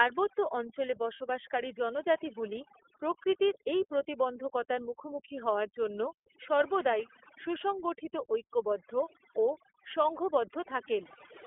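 From start to finish the speech carries overdone noise removal. The reduction is set hard enough that any frequency band sitting near the noise estimate is pushed far down or switched off, and the quieter, weaker parts of the voice are caught along with the noise. The background becomes near-silent but sprinkled with small twinkling specks.

The whole clip also runs through the iLBC codec, and its damage is plainly audible. The line is narrowband, holding roughly 300 Hz to 3.4 kHz, so everything above 4 kHz is gone. The codec builds each frame's excitation independently of the previous one, and the frame structure fits iLBC's 30 ms mode at 13.33 kbps. The result is intelligible speech with a rough, somewhat synthetic grain.

At 1.17 s there is a 30 ms gap from lost iLBC frames, consistent with a single missing frame. The decoder covers it by repeating the last pitch cycle mixed with noise, so the loss sounds like a brief held, slightly buzzy vowel rather than silence. 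Since iLBC frames are self-contained, the voice recovers almost immediately, by 1.20 s, just before "জনজাতিগুলি প্রকৃতির এই প্রতিবন্ধকতার".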